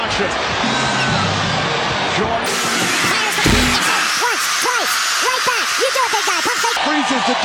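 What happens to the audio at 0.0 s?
Nothing goes wrong at 0.0 s; the audio starts cleanly with no dropout, click or distortion at that point.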